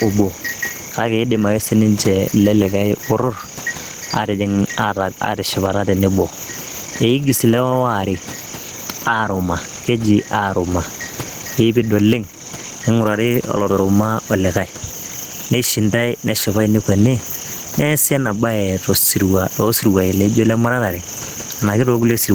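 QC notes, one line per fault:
Throughout, gain pumping: the gain swings by around 15 dB, with the room noise about 31 dB below the speech. Gain set far too high likely has a fast limiter clamping each peak, flattening the dynamics.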